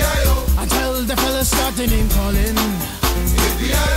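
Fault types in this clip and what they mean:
Low bit depth with dither: the audio was stored at only about 5 bits per sample, and random dither was mixed in before each value was rounded, so the rounding error no longer follows the waveform but turns into a steady bed of white noise. Throughout the clip this sits roughly 20 dB below the signal as a constant, even hiss, clearly audible under everything, with no gritty or buzzing distortion riding on the sound itself.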